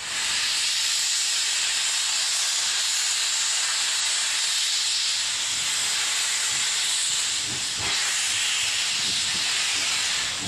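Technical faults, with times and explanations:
4.00–4.05 s and 5.62–5.67 s: compressed frames skipped. At each point the audio jumps forward by about 0.2 s, as whole blocks of the compressed stream were either missing or rejected by the decoder as damaged. The jump length fits a run of roughly four or five frames of 46.4 ms each. The join is audible either as a brief smeared blip, where overlapping lossy frames are stitched, or as a hard click between lossless frames.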